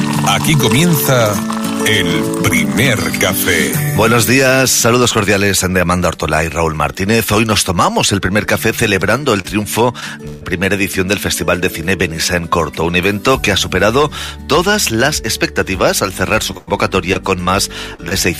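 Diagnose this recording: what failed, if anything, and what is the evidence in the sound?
Short concealed packet loss on the network path: brief smears or wobbles at 9.41, 10.00, 17.13, 17.95 and 18.08 s. Each loses 20 to 40 ms, and the receiver bridges the gap by extending the preceding sound, then blends back into the real audio.

Burst of packet loss, also on the network path: about 140 ms goes missing at 10.27 s and 100 ms at 16.57 s. The last sound is held and fades, rather than cutting to silence as a dropout would.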